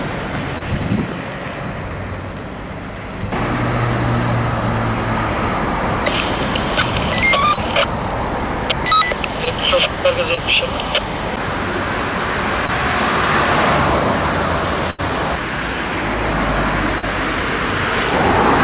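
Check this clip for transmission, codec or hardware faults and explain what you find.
Two kinds of transmission fault are present, both from lost packets. Everything in the clip stops at 4 kHz, which fits a G.711 mu-law call path at 64 kbps.

Short concealed packet loss occurs at 0.58, 7.54, 9.45, 10.34, 12.67 and 16.98 s. Each time, packets failed to arrive. About 20 ms of audio is missing in the first five, and 40 ms in the last. The receiver extended the preceding sound to fill the hole, then blended back. Each one sounds like a brief smear or wobble.

A burst of packet loss runs from 14.90 to 15.00 s. About 80 ms of audio never arrived. The receiver covered an 81 ms gap by carrying on the last sound and lowering it as the gap went on. That is heard as a held buzz or a fading hiss. The audio then jumps ahead, with the lost stretch gone.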